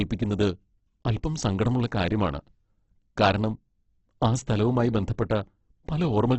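Across the whole speech clip the sound is grainy and rough, with heavy damage and nothing above 8.1 kHz. This is likely Opus compression in its music mode, which fills starved bands with noise. The narrow band fits a very low rate near 12 kbps.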